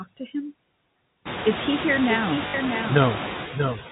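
Doubled audio track, throughout: a second, full-band copy of the speech trails the original by roughly 0.7 s at about 5 dB lower, with no decay or room colour. This likely comes from the audio being captured a second time through a slower path.

Noise suppressor artifacts, throughout: the suppressor pulls down bands it judges to be steady noise by about 18 dB. The room noise, which climbs from around 1.5 s, sinks in pauses and surges under speech.

Packet loss with last packet repeated, 2.48 to 2.54 s, just after "he here": 60 ms of audio went missing, consistent with three 20 ms packets. The receiver replayed the last packet, so a brief robotic stutter buzzes near 50 Hz.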